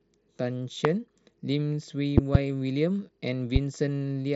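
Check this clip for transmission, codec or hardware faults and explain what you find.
One hardware fault recurs: loud pops, heard three times. They fall at 0.85–0.88 s, at 2.18–2.38 s as a double pop, and at 3.56–3.58 s. Each peaks roughly 20 to 25 dB above the speech. The likely cause is a voltage pulse from a plug, a switch or static. The speech continues underneath each thump, band-limited near 7.8 kHz by the Bluetooth mSBC headset codec.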